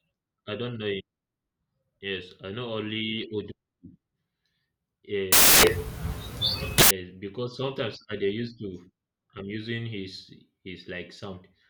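It's a speech clip, and the trouble sits between 5.32 and 6.91 s, just before "because sometimes I dey": the sound turns into a blast of loud, harsh broadband noise. That's samples built from the wrong bytes. For that stretch the reader is assembling each sample from misaligned or swapped bytes, so the jittery low bits end up as the big part of every value.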